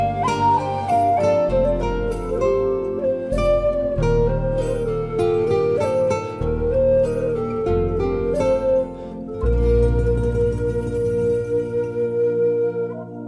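Nothing in the audio points to a technical fault. No moment in the clip stands out as something that needs a cause explained.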